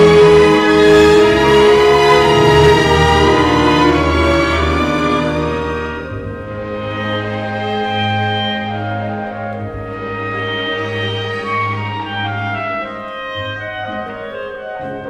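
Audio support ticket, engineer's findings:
Hard clipping, 0.00–4.67 s: peaks flattened, harsh fuzz on loud passages. Gain stage or converter overdriven by about 7 dB; squared tops add high harmonics.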